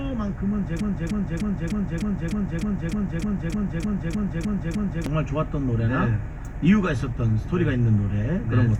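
From 0.81 s to 5.06 s the audio falls into a broken-record loop. A fragment about 0.30 s long plays 14 times back to back, each repeat identical, and whatever sound should have filled those four seconds never arrives. The likely cause is a player or stream that stalled and kept resending the last piece it held. Unlike an echo, the repeats do not decay or overlap. Unlike a dropout or stutter, there is no gap, just seamless exact copies.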